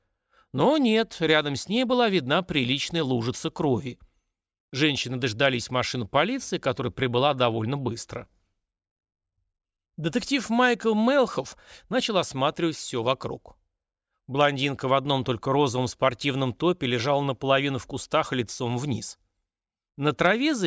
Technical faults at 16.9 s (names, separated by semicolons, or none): aliasing